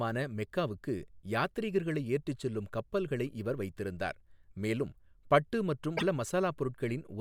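At 5.97 to 6.03 s, a likely broken MP3 bit reservoir left frames decoding from the wrong bytes: the speech jumps ahead through a brief 64 ms glitch.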